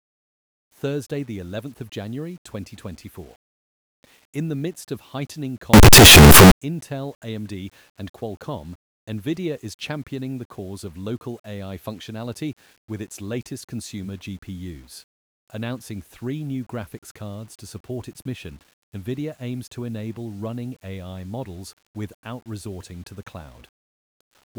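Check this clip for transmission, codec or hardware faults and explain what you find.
One fault. From 5.74 to 6.52 s, just after "the midst of heightening", the sound becomes very loud, harsh distortion with quiet parts as loud as the strong ones. The likely cause is signed and unsigned mixed up: the flipped top bit turns each zero crossing into a full-range jump.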